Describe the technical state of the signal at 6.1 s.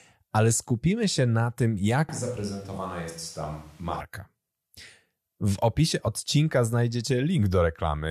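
At 6.06 s, compressed frames are skipped: a single frame of roughly 23 ms never reached playback, missing or rejected by the decoder. The speech jumps forward by about that much.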